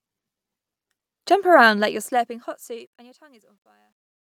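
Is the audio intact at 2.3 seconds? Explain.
No. At 2.3 s the audio is in the middle of truncation distortion on a fade, running from 1.70 s to 4.26 s. As the fade-out lowers the level, the signal is kept at too few bits without dither, consistent with a 12-bit path, so low-level detail turns into coarse steps. The tail sounds gritty, worst from 3.16 s to 4.26 s.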